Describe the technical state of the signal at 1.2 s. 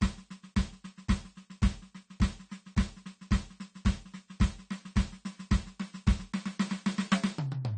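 At 1.2 s the music shows low-bitrate audio saved at a high bitrate, present across the whole clip. Nothing sounds above 9 kHz, so the top end is dull. This likely comes from a 32 kbit/s AAC encode later re-saved as 256 kbit/s MP3, which cannot restore what was removed.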